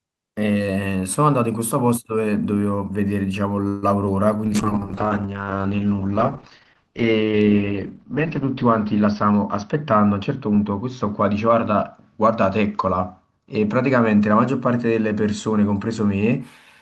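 Speech, with four faults. At 3.67–3.84 s a call audio freeze stretches the last sound into a fading buzz for about 150 ms, likely from packets held up until the jitter buffer ran dry. On a spectrogram it shows as a smeared, decaying band before speech resumes with nothing lost. Short concealed packet loss at 4.06–4.08 s drops 20 ms and patches it with synthesized continuation. It is heard as a brief smear and seen as a tiny blurred seam in the waveform. A call bitrate drop from 4.47 to 16.47 s takes Opus from 32 to 8 kbps and narrows the bandwidth from 20 kHz to 6 kHz, bottoming out for about 3.8 s. The speech turns rough and muffled, and a spectrogram shows everything above 6 kHz abruptly cut flat. A jitter buffer speed-up from 9.07 to 10.79 s trims pitch periods to shed about 150 ms. The speech runs at 108% with unchanged pitch, and the waveform shows whole cycles removed without visible gaps.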